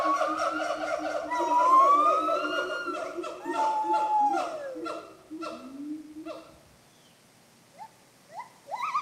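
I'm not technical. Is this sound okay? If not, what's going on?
Yes, nothing stood out as wrong when listening to this sound.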